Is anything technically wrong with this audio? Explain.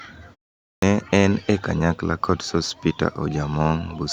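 Yes. Clipped start after a pause, at 0.77 to 0.83 s. After half a second of silence the output device drops into an idle state and needs time to wake or relock, so about 55 ms of sound is swallowed. "en e kanyakla kod" then begins abruptly, missing its opening sound.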